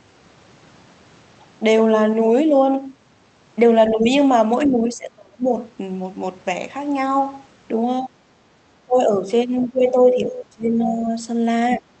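Speech suppressed in double talk first appears at 3.93–4.09 s as a shallow dip of about 5 dB. It returns more deeply at 4.67–5.54 s, dropping by about 25 dB, then at 8.00–8.19 s and 8.86–9.25 s, each about 20 dB down. The talker's level sags and parts of the sound drop out. The likely cause is an echo canceller that could not tell the near talker from the far side's loudspeaker echo while both were active, so it attenuated everything.

The longest suppression runs from 9.59 to 11.15 s, holding the speech down by roughly 15 dB. Inside that stretch, at 10.80–10.94 s, the other side's voice leaks through as a brief fragment, about 15 dB below the talker. The echo canceller likely left a small residue of the loudspeaker playback in the microphone signal, so a faint second voice slips out for a moment. A final double-talk dip at 11.70–11.90 s cuts the speech by about 25 dB. Throughout, the Opus call path caps the audio at about 8 kHz.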